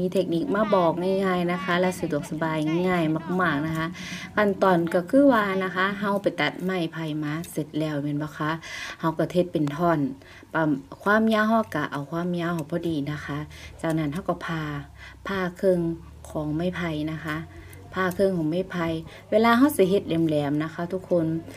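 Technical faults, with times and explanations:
No technical faults can be heard anywhere in the clip.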